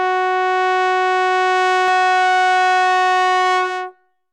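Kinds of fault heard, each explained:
Doubled audio track: From 1.88 s to the end, the music is heard twice. A second, full-band copy trails the original by around 200 ms. It sits about 5 dB lower. The copy has no decay and no room colour, so it is not an echo. It cuts in abruptly rather than building up. The likely cause is the same signal being captured a second time through a slower path and mixed back in.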